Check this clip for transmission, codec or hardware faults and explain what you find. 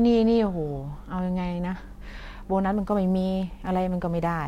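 One hardware fault is present: sample clock jitter, from 2.73 s to the end of the clip at 4.48 s. The converter's clock wanders by a few microseconds, so each sample is captured slightly off its proper instant. The error scales with how fast the waveform is changing, so it builds on loud passages and sibilant, high-frequency parts of the speech, sitting roughly 40 dB below the signal as a fine hiss and roughness that disappears in pauses.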